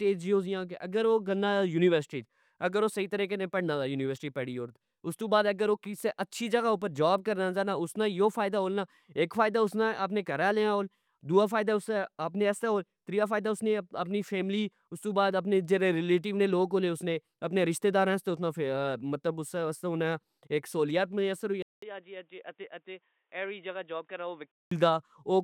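At 21.62 s the speech drops out for 200 ms, then comes back roughly 10 dB quieter and boxy, with nothing above 3.8 kHz and a faint new background noise, until 24.71 s. That's likely the input switched to a poorer device.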